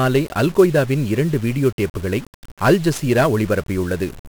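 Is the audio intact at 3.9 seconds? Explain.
No, at 3.9 seconds you're still hearing 1-bit DFPWM compression, which runs through the whole clip. Each sample gets a single bit that just nudges an adaptive level up or down, so the quantisation noise is heavy and spread across the band. The speech comes out fuzzy and crackly, and the top end is buried under hiss. The damage is severe, and it fits a stream of about 48 kbps.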